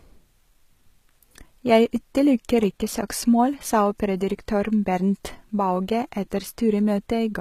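HE-AAC compression, likely, runs throughout this speech: treble is rebuilt from copied lower bands, so sibilants sound gritty and lispy, with nothing above 14.9 kHz.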